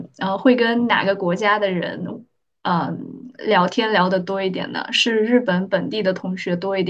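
No technical faults are audible.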